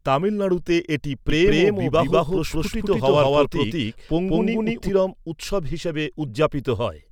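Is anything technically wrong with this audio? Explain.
Yes. A doubled audio track runs from 1.30 to 4.90 s, starting after "তামিলনাড়ুতে এটি" and ending before "উৎসব হিসাবে". A second, full-band copy of the speech trails about a fifth of a second behind at roughly equal level, likely from a slower capture path or misaligned edit. It enters and leaves abruptly, with no decay or room colour.

Corrupt frames were decoded at 2.66 to 2.72 s and 6.28 to 6.30 s, the latter just after "উৎসব হিসাবে". Flipped bits in a few compressed frames made the decoder misplace energy across frequencies, giving short bursts of misplaced sound, peaking around -20 dBFS and -30 dBFS respectively.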